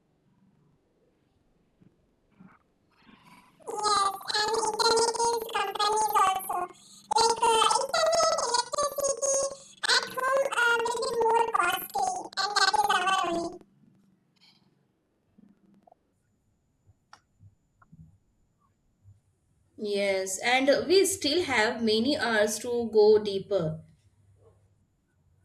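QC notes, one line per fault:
0.00–16.18 s: planar audio read as interleaved. The speech jumps a full octave, 12 semitones, with a steady flutter at about 11.7 Hz. Each 85.33 ms block, consistent with 4096-sample blocks, carries all left samples followed by all right samples. When it is read as alternating pairs, each channel's half plays at double speed, left then right. The overall pace stays correct, but pitch doubles and the channel switch at every block boundary produces the flutter.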